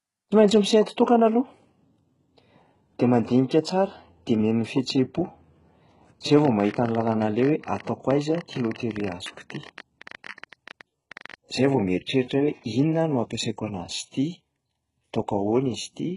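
A speech clip, likely passed through heavy HE-AAC compression at a very low rate, which fits a bitrate near 12 kbps. The codec keeps only the lower spectrum and fakes the treble by copying bands upward, so nothing survives above 11.1 kHz, and s sounds come out gritty and metallic with mismatched harmonics. From 6.39 to 11.35 s, interference or a faulty connection likely injects a train of clicks, around 70 similar pulses at an uneven 15.2 per second, peaking a few dB above the speech and ticking through pauses too.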